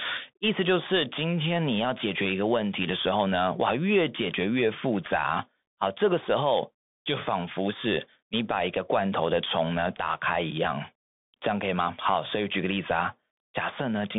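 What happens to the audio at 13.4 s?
At 13.4 s, as throughout the clip, the speech passes through a Bluetooth CVSD headset codec, whose one-bit, adaptive-step delta coding fits a 64 kbps link. It cuts everything above 3.7 kHz, leaving thin, narrowband speech with scratchy s sounds and granular hiss.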